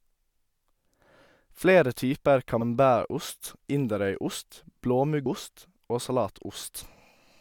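At 2.60 s and 5.25 s, damaged data in the compressed stream makes the decoder misread frames and lose sync, producing brief glitches in the speech.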